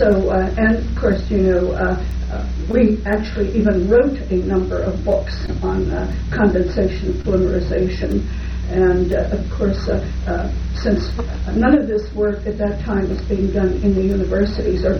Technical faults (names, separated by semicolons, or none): short concealed packet loss